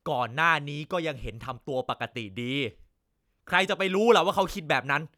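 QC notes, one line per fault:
Nothing stood out on listening to this speech recording.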